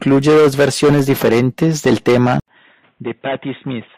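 At 0.67 s, just before "diferentes del", a corrupt frame is decoded. Damaged bits put energy at the wrong frequencies. A sharp, loud blip results. It is very brief, which points to only a few bad frames being played.

At 2.40 s, after "diferentes del", the speech cuts out for 80 ms. It returns duller and boxier, with nothing above 3.8 kHz. The level falls by around 10 dB, and a faint new hiss sits well below the voice. The likely cause is an input switched to a poorer device.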